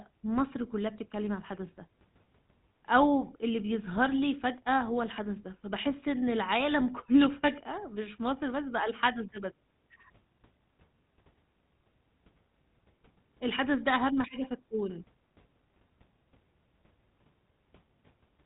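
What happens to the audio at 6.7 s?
At 6.7 s, as throughout the clip, the speech carries GSM full-rate codec damage. It models the vocal tract and drives it with sparse, regular pulses, which fits a 13 kbps codec. Nothing above 3.8 kHz survives. The voice sounds plainly buzzy and gravelly.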